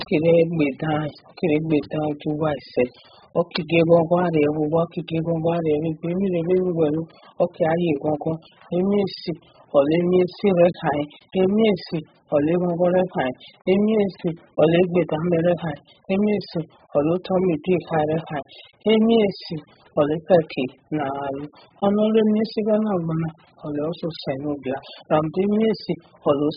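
From start to finish the speech is band-limited, with nothing above about 5.1 kHz, and it carries heavy codec damage: a dull, smeared tone, warbling on sustained sounds and a fizzy, unstable texture on sibilants. This is likely AAC compression at a very low bitrate, around 8 kbps. With so few bits per frame, the encoder drops the upper band entirely and quantises what remains coarsely, leaving spectral holes that shift from frame to frame.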